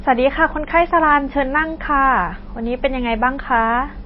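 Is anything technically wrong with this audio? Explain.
Yes. Throughout, the speech is swirly and watery with nothing above 5.5 kHz, likely MP3 compression at a low bitrate near 24 kbps, where weak frequency lines flicker between frames, unlike a plain low-pass filter.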